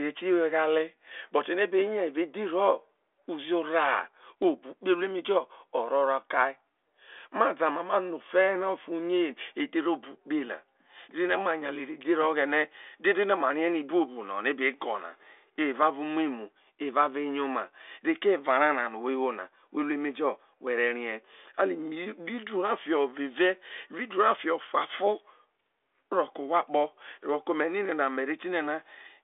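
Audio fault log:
Nothing stood out on listening to this speech.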